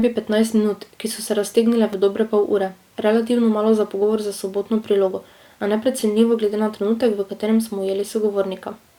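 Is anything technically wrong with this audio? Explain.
Yes. There is a brief buzzy click at 1.93 s, between "ki so se raztegnile" and "v dobre pol ure", and again at 6.00 s, between "prilogo a" and "glede na trenutek v". Both are a repeated buffer: fresh audio arrived late, so a tiny slice, consistent with a 5 ms buffer, was replayed twice more with hard joins. No audio appears lost.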